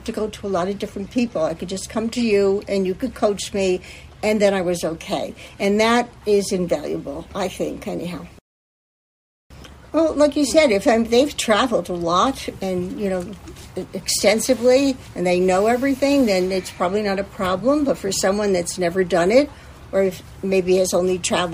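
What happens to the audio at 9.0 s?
Nothing goes wrong at 9.0 s; the audio plays through that moment intact, with no dropout, click, distortion or other fault.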